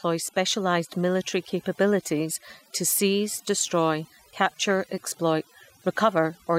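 From the start, overdone noise removal affects the whole clip. A noise reduction stage was pushed too hard on a noisy recording. It drove single frequency bands down whenever they came close to its noise estimate. Quiet parts of the voice were caught too. The background drops and breaks up into twinkling specks. This lasts to the end of the clip.

From 2.31 to 2.42 s comes DAB burbling, just before "to seize destroy". Weak reception let bit errors slip past the error correction into the MP2 audio data. Corrupt samples put short blips of noise in single sub-bands. The burst lasts about 110 ms, which fits roughly five damaged frames and a low error rate, around a fifth of a percent.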